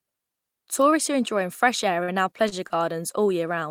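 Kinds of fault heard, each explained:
Short stall from a late packet: a packet arrived late three times, so the last sound was stretched by 45, 29 and 20 ms, with nothing lost, the first after "are enjoying fresh air". A spectrogram shows flat, frozen bands; the waveform, short repeating stretches.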